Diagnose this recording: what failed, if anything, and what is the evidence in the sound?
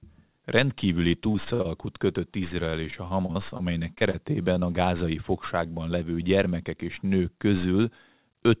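Repeated packet loss (robotic sound), a network fault, runs from 1.32 to 1.67 s and 2.71 to 4.16 s. Recurring holes, each patched by extending the previous sound, make the audio choppy rather than a single smear.

A short stall from a late packet occurs at 4.54 to 4.58 s. The jitter buffer ran dry and the sound was held about 22 ms, then resumed with nothing missing, unlike a true loss.

A short concealed packet loss follows at 4.60 to 4.64 s. About 20 ms never arrived and was filled by continuing the prior sound, giving one brief, isolated smear instead of sustained robotic chop.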